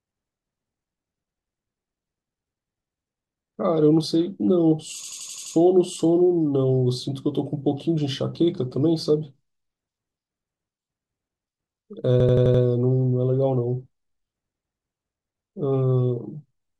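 A system hang loop interrupts this speech clip at 5.04 to 5.55 s and again at 12.20 to 12.63 s. Playback froze while the hardware kept replaying one 85 ms slice, six and then five times, giving an 11.7 Hz machine-gun stutter that fits a 4096-sample ring buffer.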